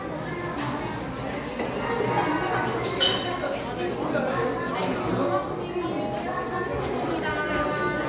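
An everyday sound recording with nothing technically wrong to point to at any time.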